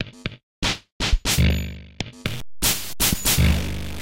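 Likely a stuck bit, one data line held fixed from 2.26 s to the end and weighted about -25 dBFS, making the sound harsh and buzzy, with noisy pauses.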